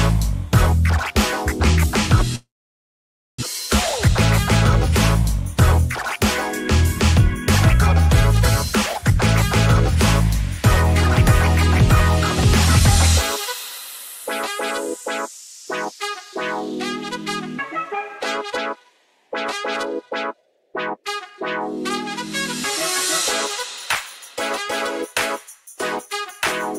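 From 2.35 s to 3.44 s the audio breaks off: the last sound is stretched into a fading buzz, then about 930 ms of near-silence, and it resumes with roughly a second missing and a slight timing shift, likely a long network dropout.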